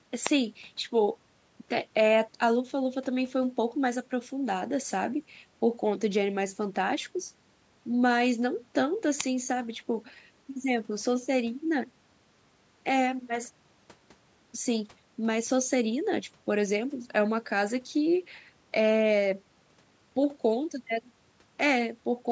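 There are no technical faults to describe in time order in this speech; the call microphone processing that trims the lowest bass and leaves nothing above 8 kHz is normal and not a fault.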